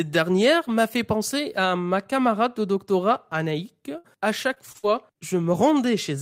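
Speech with three kinds of network damage in its second half. At 3.33 s and again between 3.67 and 3.83 s, a lost packet rebuilt from error correction leaves a brief rough, noisier patch of about 20 ms with no gap, because the next packet carried a low-bitrate copy. From 3.98 to 4.06 s a burst of packet loss stretches the last sound for about 58 ms as it fades, then speech resumes with about 60 ms skipped, a single held-then-jump event rather than a smooth patch. From 4.54 to 5.55 s, repeated packet loss gives choppy, robotic sound: five short holes, the longest 41 ms, are each filled by extending prior audio, and about 120 ms of the stretch is gone, a recurring pattern unlike the one-off burst.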